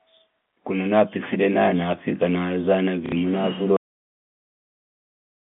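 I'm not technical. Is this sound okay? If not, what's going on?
No. At 3.06 to 3.12 s there is packet loss with the last packet repeated: a short gap of about 60 ms, likely two lost chunks of data, was filled by replaying the last piece. That makes a brief robotic stutter with a buzzy edge, not a silent hole as a plain dropout would leave.

The second problem is a cut-off end. At 3.77 s the recording simply stops in the middle of a sound and goes to dead silence for the rest of the clip. A natural ending trails off, but this one snaps off with no fade. The narrow, telephone-like tone throughout is normal for a phone line and isn't a fault.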